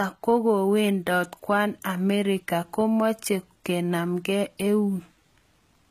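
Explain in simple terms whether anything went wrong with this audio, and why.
Something did go wrong here: the whole speech clip is low-bitrate audio saved at a high bitrate. Nothing comes through above about 14.8 kHz. It was likely squeezed hard once, then re-saved as a big MP3 that can't restore what was lost.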